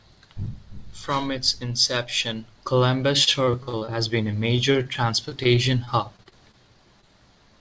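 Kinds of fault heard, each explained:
Repeated packet loss (robotic sound): from 3.24 to 3.89 s and again from 4.31 to 6.55 s, audio kept failing to arrive and each hole was patched by stretching the preceding sound. The first run is nearly a third concealed with gaps up to 42 ms, and the second is about an eighth concealed.
Short concealed packet loss: at 7.01 to 7.05 s, about 20 ms of speech never reached the decoder in time. The receiver bridged it by extending the last sound and fading back into the real signal, leaving a brief smear or wobble in the speech.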